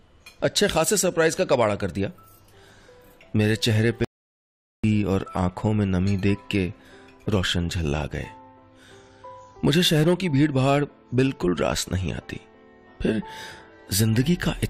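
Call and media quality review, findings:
Audio dropout to silence, 4.05 to 4.84 s: sound cuts mid-flow, returns abruptly after 0.79 s. Waveform flatlines to silence; spectrogram shows an empty vertical band, no room tone. Likely input loss (disconnect, link failure, mute) while recorder wrote silence.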